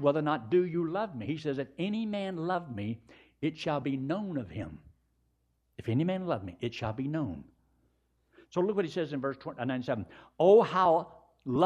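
Clock-matching software likely stepped its playback rate to correct drift, a drift correction step from 1.95 to 2.55 s. The speech runs about 5.5% fast and rises roughly 93 cents, nearly a semitone, then snaps back just before "me it shall be".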